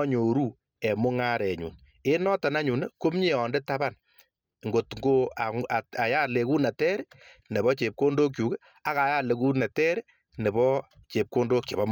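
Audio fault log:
No faults were heard in this speech recording.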